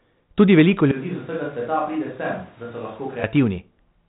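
At 0.92 s the speech turns abruptly roomy and hollow, loses bass, drops by about 10 dB, and carries room noise only around 25 dB below it, most likely a switch to a distant microphone. It switches back just as suddenly at 3.23 s. A plain gain drop would not add reverberation and noise, and a speaker walking away would fade gradually. The telephone band limit near 3.9 kHz stays the same throughout.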